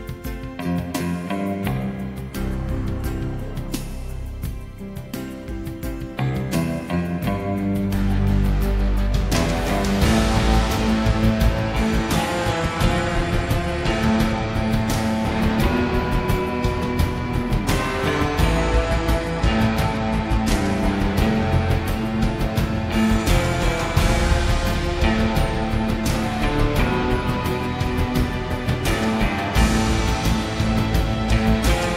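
Bluetooth SBC bit pool drops occur at 12.51 to 14.51 s and 18.60 to 20.78 s. The link appears to have congested, and the encoder cut its bit budget, consistent with a bit pool falling from 28 to 14, near 108 kbps. The treble dulls and gritty noise rises.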